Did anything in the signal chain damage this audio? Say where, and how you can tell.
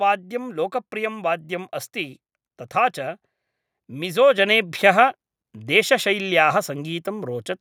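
Yes. At 4.38 s the microphone volume stepped up by about 5 dB, a call-processing stage raising the device's input gain in one jump. Speech and background noise rise together and stay raised, unlike a talker getting louder or a gradual gain ramp.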